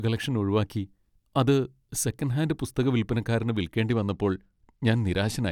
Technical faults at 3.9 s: Bluetooth SBC bit pool drop

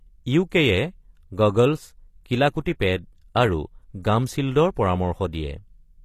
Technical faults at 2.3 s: HE-AAC compression

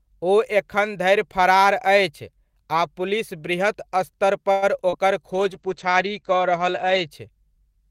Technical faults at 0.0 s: none

